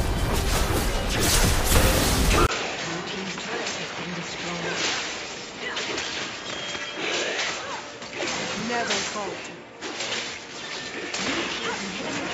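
At 2.47 s the input likely switched to a poorer device: after a 20 ms gap, the sound turns duller and much quieter, with new background noise. On a spectrogram everything above 7.6 kHz disappears. At 8.59 s a 2 ms block of digital silence gives a sharp tick, seen as a brief flat line with abrupt edges.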